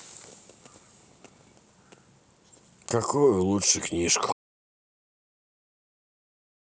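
An audio dropout to silence begins at 4.33 s and runs to the end. The speech cuts off mid-flow into silence with no room tone, likely from a lost input.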